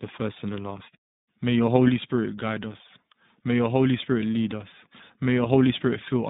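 From start to finish the speech sounds thin, boxed-in and slightly rough, with a synthetic graininess that stays plainly audible throughout. Everything lives within a telephone band of roughly 150 Hz to 3.7 kHz, so sibilants lose their air and the low body is gone. This is the iLBC codec at work. It rebuilds each short frame's excitation independently, which fits 20 ms frames at 15.2 kbps, and leaves that coarse, buzzy texture.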